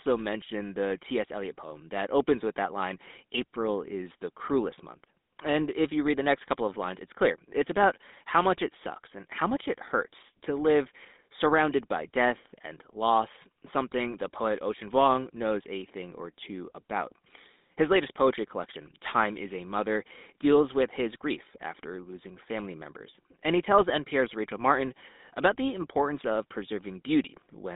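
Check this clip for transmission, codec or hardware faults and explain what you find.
The whole clip carries one fault: GSM full-rate codec coding. Throughout, the speech is confined to a 200 Hz to 3.7 kHz band with nothing above 3.8 kHz. Pulse-driven vocal-tract modelling leaves a plainly audible buzzy, gravelly roughness, consistent with 13 kbps GSM.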